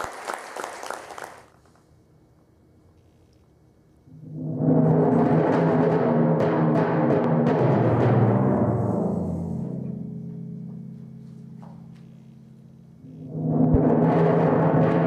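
At 7.24 to 7.27 s a single sharp pop cuts through the sound. It peaks roughly 10 dB above the surrounding level. At 13.74 to 13.77 s another loud pop follows, at the same strength. Each lasts only a few hundredths of a second. The sound carries on underneath both without a break. The likely cause is a brief voltage pulse, such as a switch, static discharge or a driver glitch, entering the signal chain.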